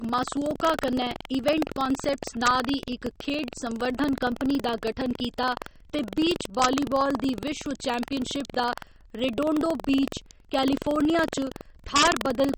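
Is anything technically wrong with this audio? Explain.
Yes, several faults are present in this speech.

MP3 compression, throughout: the plainly audible swirly, watery texture on sibilants points to a likely low bitrate around 32 kbps. Starved of bits, the encoder drops the treble and lets weak frequency lines flicker between frames, smearing consonant attacks.

Buffer tearing, throughout: a rattling buzz at 21.5 Hz rides on the speech, which fits a 2048-sample buffer. The writing and reading positions have drifted and cross each period, so a small slice of every buffer carries audio about 150 ms stale, joined abruptly on both sides.

Integer overflow, at 0.67 s just before "कन्नै इवेंट कान्सेप्ट्स", 2.47–2.48 s before "दी इक खेढ संवर्धन", 6.62–6.65 s before "दी विश्व", and 11.96–12.07 s: peaks exceeding the integer limit by up to about 2 dB wrap to the opposite sign, giving sharp cracks far harsher than clipping.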